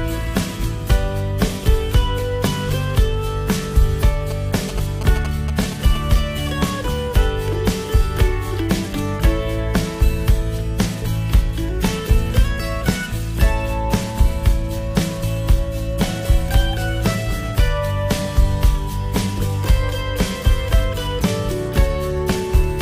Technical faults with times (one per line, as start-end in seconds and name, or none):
4.31-5.97 GSM signalling bursts